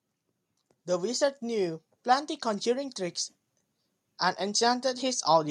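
From 0.86 to 3.04 s, automatic gain rising lifts the speech and background together by about 4 dB; the waveform envelope widens steadily across that span.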